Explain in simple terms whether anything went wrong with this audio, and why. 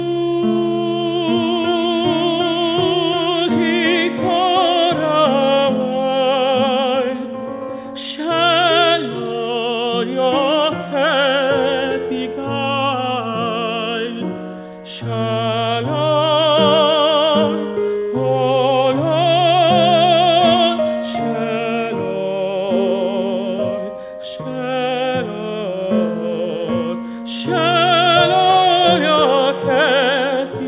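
Nothing went wrong here.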